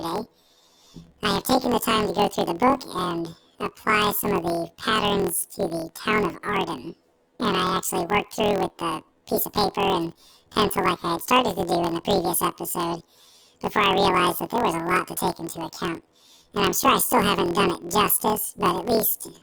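Throughout, the speech has a robotic buzz at 41.7 Hz: planar audio read as interleaved, so each 24 ms block plays twice at double speed.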